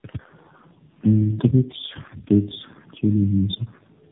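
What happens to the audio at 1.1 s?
At 1.1 s the speech carries tandem speech coding, present across the whole clip: four speech codecs decoding and re-encoding in turn leave it rough, muffled and warbly, with nothing above 3.7 kHz.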